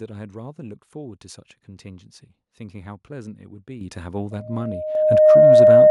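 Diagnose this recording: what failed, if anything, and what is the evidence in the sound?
The microphone volume stepped up twice, a call-processing fault: automatic gain control judged the input too quiet and raised the device's input level in single jumps rather than a gradual ramp. At 3.81 s the level rises by about 9 dB, and at 4.95 s by a further 5 dB or so. Speech and background noise rise together. On a waveform the envelope steps abruptly wider; on a spectrogram every band, including the noise floor between syllables, brightens at once.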